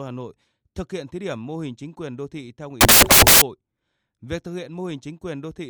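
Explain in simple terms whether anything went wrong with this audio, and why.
Something did go wrong, between 2.81 and 3.42 seconds, where the speech turns into a burst of loud hiss. This is samples built from the wrong bytes: the player stitched each tiny piece of sound together from the wrong parts, so the fine, jittery detail became the main signal. Unlike ordinary background static, which sits quietly under the voice, this noise replaces it outright.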